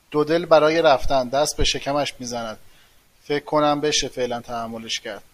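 No faults are audible here.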